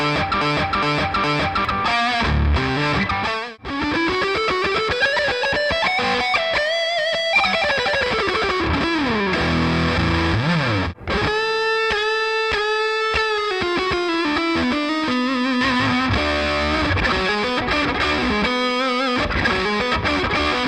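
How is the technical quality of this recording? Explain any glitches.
The recording opens with one glitch, a broken-record loop. It is already under way when the clip starts and runs to 1.65 s. A 0.41 s fragment repeats exactly, back to back, three times. The player or stream likely stalled and kept resending its last held piece. The audio meant for that span is lost.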